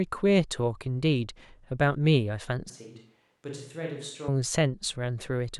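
Speech where, from 2.7 to 4.28 s, the voice abruptly turns roomy, hollow and thin, about 10 dB quieter with noise around 40 dB below it, likely a switch to a distant microphone; unlike added reverb, it cuts in and out instantly.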